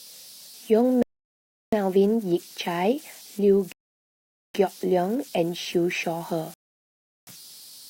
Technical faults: converter idle tones; rebuffering stall

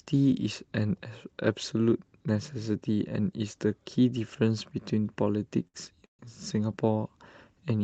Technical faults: short stall from a late packet; call audio freeze

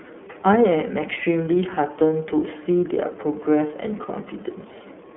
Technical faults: iLBC codec

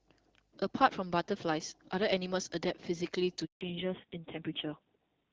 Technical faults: handover gap; fallback to narrowband

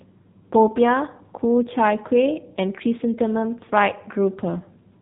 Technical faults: AMR narrowband mobile codec

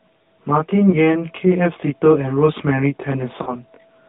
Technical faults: channel delay (comb filtering); AMR narrowband mobile codec; lost AMR speech frames

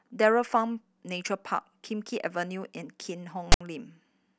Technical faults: file tags played as audio

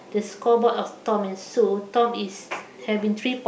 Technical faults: none

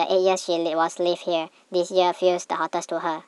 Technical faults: wrong sample rate

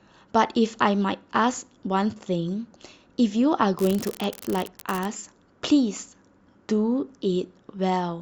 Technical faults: unreliable data bit

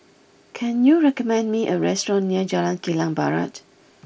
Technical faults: none

